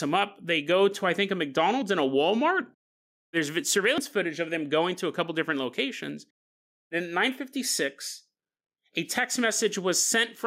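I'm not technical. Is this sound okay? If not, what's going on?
No. There are two problems in this speech recording.

The first is gain pumping, and it runs through the whole clip. The likely cause is that the recording level was set too high and an automatic level control kept pulling it down on every loud moment. This squashes the loud and quiet parts closer together.

The second is a dropped buffer (overrun), heard twice as a small jump in the sound. At 1.82 s, between "to I think a" and "and a", a tiny slice of audio goes missing. At 3.98 s, just before "footage of them going", a longer piece is lost, a bit under a tenth of a second. There is no gap of silence. The sound simply skips ahead. This is likely the recording software falling behind and losing a chunk of audio before it could save it.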